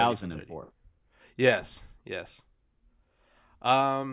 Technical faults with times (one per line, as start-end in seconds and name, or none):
none